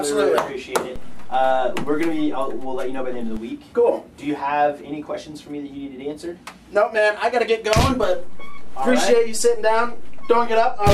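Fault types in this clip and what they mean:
DC step: The waveform's zero line suddenly shifts away from centre, as if a fixed offset voltage were switched into the signal path. It happens twice. At 0.96 s the baseline jumps by about -23 dBFS and holds until 3.37 s, then returns. At 8.03 s it jumps by about -20 dBFS and stays offset to the end. Each jump and return is heard as a low thump. The sound itself carries on unchanged.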